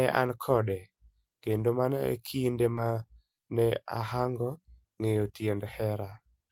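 Short concealed packet loss at 2.75–2.79 s, just after "kendo mano e kinde": about 20 ms of the speech arrived too late for the decoder. The receiver papered over the hole by extending the preceding sound before rejoining the real signal, leaving a brief smeared wobble.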